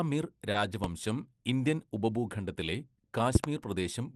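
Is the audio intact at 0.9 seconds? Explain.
No. A loud pop strikes from 0.84 to 0.88 s, a single sharp thump roughly 20 dB above the speech, which carries on beneath it. This is likely a sudden voltage pulse, from a plug, switch or static, added to the signal.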